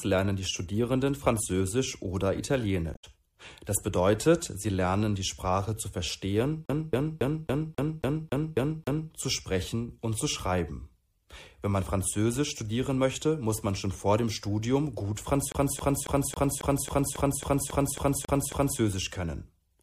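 Damaged data in the compressed stream at 2.91 to 3.04 s makes the decoder lose frame sync and hunt for the next header, producing a brief glitch. A CD stuck on one turn, its laser thrown back each rotation, loops the same 0.27 s with a mute at each jump, nine times from 6.66 to 9.11 s and twelve times from 15.52 to 18.80 s.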